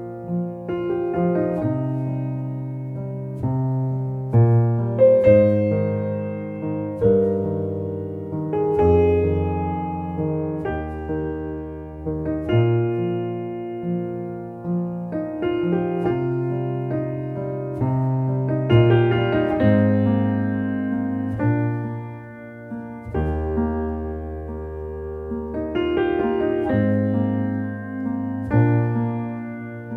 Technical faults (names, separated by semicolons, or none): none